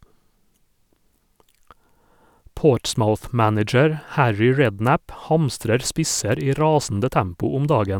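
No technical faults can be heard anywhere in this speech clip.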